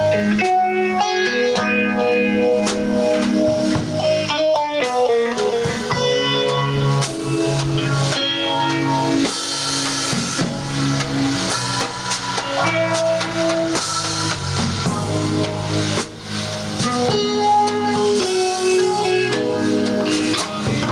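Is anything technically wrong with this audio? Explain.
Yes. Throughout the clip there is gain pumping: the input gain was likely set far too high, so a fast limiter keeps pulling it down, making the gain swing by around 15 dB. At 0.70 s there is a bit error spike, a flipped bit jumping the waveform by a power of two and straight back, heard as one sharp broadband tick consistent with a single corrupted sample.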